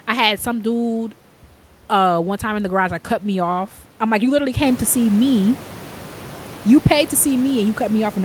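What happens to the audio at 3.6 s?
Nothing goes wrong at 3.6 s; the speech there is intact, with no dropout, glitch or distortion.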